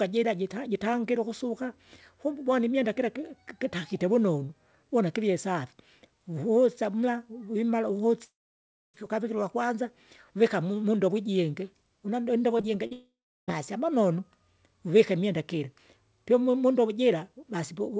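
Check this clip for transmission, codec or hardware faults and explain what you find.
Two kinds of transmission fault are audible in this speech, both network losses on a call path whose audio stops at 8 kHz, consistent with a G.722 wideband codec.

Long network dropout, 8.24–8.96 s and 12.93–13.50 s: audio likely stopped arriving, so the receiver stretched the last sound into a fading buzz or hiss, then silence (about 0.6 s, then about 0.4 s) before the speech resumes.

Short concealed packet loss, 12.58–12.61, 12.61–12.65 and 12.87–12.93 s: late packets were replaced by extrapolating the preceding sound, heard as brief smears or wobbles just before the second dropout.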